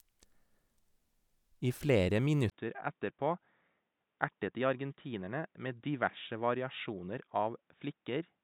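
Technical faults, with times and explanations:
2.50–8.44 s, input switched to a poorer device: Right after "I flere", a brief gap of about 20 ms interrupts the speech. From there to the end, the sound is duller and boxier. Nothing comes through above 3.8 kHz. The level drops by a few decibels, and a faint new background noise appears well beneath the speech. The likely cause is the system changing to a different, narrower-band microphone or a headset call profile mid-recording.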